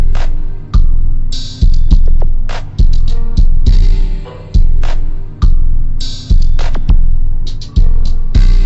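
Wrong sample rate throughout: played at half its recorded rate, likely 48 kHz audio played at 24 kHz, the sound runs at half speed and an octave low.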